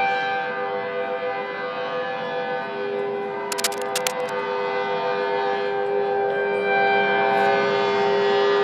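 Cable scratch noise runs from 3.52 to 4.37 s: a dense, uneven burst of scratching and rustling sits over the sound, only about 5 dB below it. The likely cause is a worn cable, connector or control being moved, its contact resistance fluctuating rapidly.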